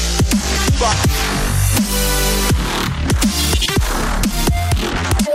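At 3.39 s the pace suddenly jumps and stays that way right to the end, running about 1.53 times faster while the pitch doesn't budge. That's a time-stretched section, likely software squeezing the tail to fit a shorter slot, keeping the pitch steady by cutting out tiny slices of the sound as it goes. That squeezing is what you hear as a hurried, rushed feel from that point on.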